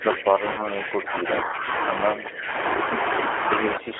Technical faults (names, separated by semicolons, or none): G.729 codec; speech suppressed in double talk